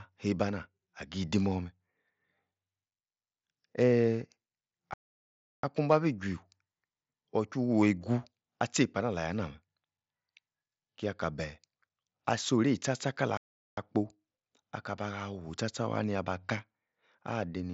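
At 4.94 s the speech halts for about 0.70 s, and at 13.37 s for about 0.40 s, then continues. That points to a playback stall, likely a starved or blocked player, not a dropout, where audio would be lost and skipped.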